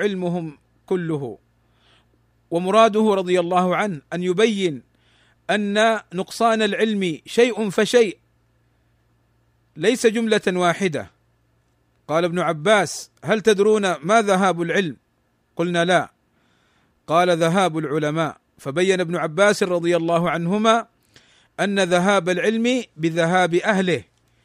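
No technical faults are audible anywhere in the recording.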